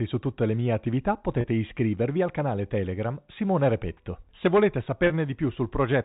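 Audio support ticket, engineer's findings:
Packet loss with pitch repetition, 1.41–1.44 s and 5.07–5.10 s: brief held, buzzy tone where about 30 ms of speech went missing, fitting one dropped packet each. Receiver concealment looped the last pitch period across the gap. G.711 path band-limited to 4 kHz.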